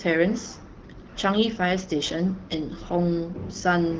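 No technical faults can be heard anywhere in this speech clip, which carries the light coloration typical of the AMR wideband (HD Voice) codec at 12.65 kbit/s.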